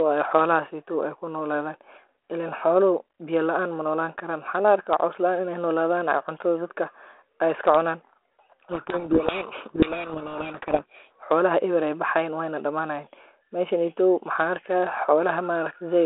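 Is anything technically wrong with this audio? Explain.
Yes. From 8.72 to 11.11 s a codec payload misread occurs: the G.726 code words arrive with their bit order reversed, so the decoder builds harsh distortion that buries the speech. Unlike low-bitrate G.726 hiss, this starts and stops abruptly; the surrounding 32 kbit/s telephone-band audio carries only light codec grain.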